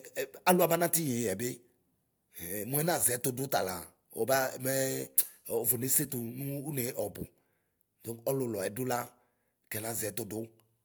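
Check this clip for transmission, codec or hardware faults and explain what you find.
Checking this clip turned up no faults to explain.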